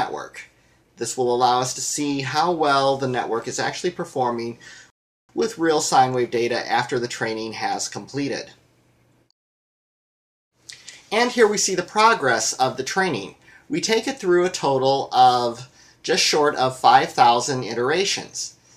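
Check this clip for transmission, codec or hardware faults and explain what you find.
There's one fault, a rebuffering stall from 4.90 to 5.29 s. The player ran dry of downloaded audio, so the sound drops to silence for about 388 ms, then picks up exactly where it left off. Nothing's missing; the stream just runs that much longer.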